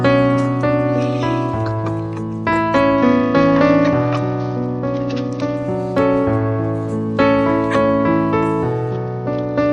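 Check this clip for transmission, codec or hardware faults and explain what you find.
Two stretches of Bluetooth SBC bit pool drop are audible, from 2.98 to 5.57 s and again from 8.91 s to the end. The link appears to have congested, and the encoder cut its bit allocation, which points to a fall from a bit pool around 28 to about 9, near 78 kbps. Starved of bits, the upper sub-bands go empty and the rest are coarsely quantised, so the treble dulls and a gritty grain rises until the rate recovers.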